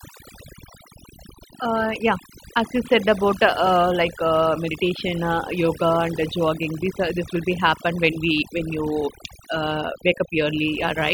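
Speech, with overdone noise removal running from start to end. The noise reduction was set too strong. It pulls individual frequency bands down or shuts them off whenever they sit near its noise estimate. Quiet parts of the voice get caught too. Between phrases the background drops and breaks up into twinkling specks.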